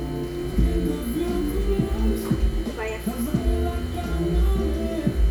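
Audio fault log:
Nothing to log here, since no faults turn up anywhere in this sound recording.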